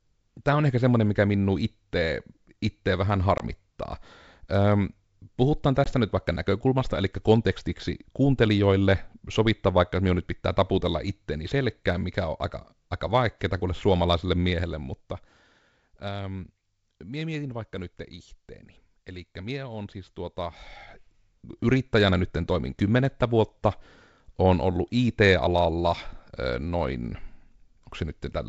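Packet loss on an ADPCM call strikes at 3.38 to 3.41 s, right after "mikä minun itse vähän", and at 5.84 to 5.93 s, just before "nyt vaikka näkökulmasta eli". Each time about 20 ms of audio, roughly a single packet, drops to hard-edged silence. The decoder's predictor and step size lose sync with the sender, so the returning speech distorts briefly before settling.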